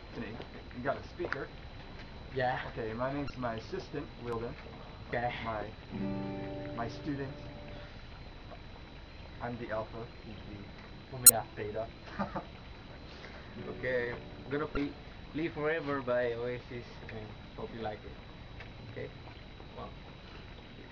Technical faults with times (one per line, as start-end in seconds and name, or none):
3.27-3.30 damaged data in a compressed stream
5.10-5.13 damaged data in a compressed stream
11.26-11.30 damaged data in a compressed stream
14.74-14.77 damaged data in a compressed stream
18.86-18.90 damaged data in a compressed stream